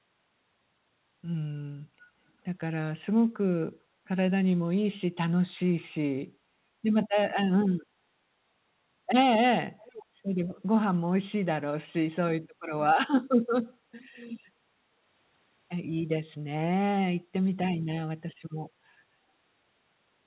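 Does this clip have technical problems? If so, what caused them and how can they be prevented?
Yes. A faint copy of the speech trails about 435 ms behind at 9.78 to 10.05 s, and much fainter at 14.16 to 14.23 s. This is echo leak, likely from a loudspeaker at the far end whose echo canceller let some of its microphone pickup through and back. To prevent it, the far end should use a headset, or the echo canceller should be set to model an echo path of about 435 ms.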